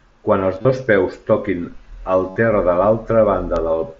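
From 0.26 s to 3.86 s, the device reading the digital link runs on its own clock, not locked to the sender's. Each time the two clocks slide past each other, one sample is dropped or repeated. These word clock ticks come roughly every 0.3 s, about fifteen in all, which fits a clock mismatch of around 70 parts per million.

From 0.62 to 0.65 s, concealed Bluetooth headset packet loss removes about 30 ms of audio between headset and phone. The receiver fills the gap by repeating the best-matching recent stretch of waveform, which gives a brief buzzy tone. A longer loss from 2.30 to 2.36 s covers 60 ms, so the held buzz lasts longer and ends in a small warble as real sound returns. All of this comes through the mSBC headset codec's wideband path, which passes sound up to 8 kHz.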